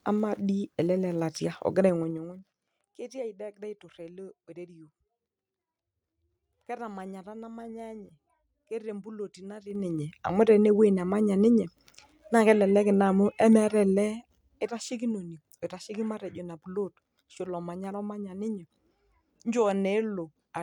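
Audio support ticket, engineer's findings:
Zipper noise in speech: ticking, zipping grit riding on the voice while the level moves. 1.86–2.54 s: drop of around 20 dB. 9.59–10.04 s: rise of around 20 dB, fastest stepping. 13.90–14.71 s: drop of around 10 dB, slower. Gain applied in 2 dB jumps, roughly 5 to 20 steps per second, unsmoothed; each jump leaves a small click. Probable component: gain/volume stage updating per block without ramping.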